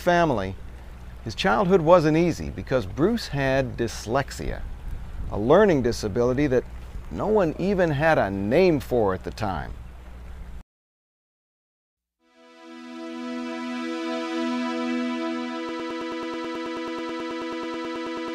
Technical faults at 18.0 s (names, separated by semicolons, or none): broken-record loop